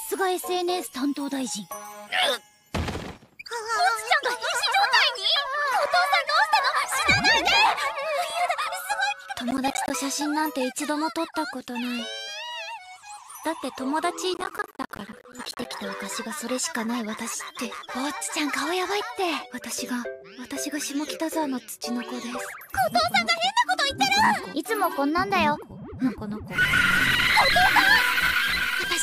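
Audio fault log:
9.51–9.90 s and 14.34–15.65 s, processor overload crackle: short silent gaps of around 10 ms each repeatedly cut into the sound, roughly 10 in the first burst and several dozen in the second. The waveform shows hard-edged dropouts to silence. The spectrogram shows dense vertical broadband stripes.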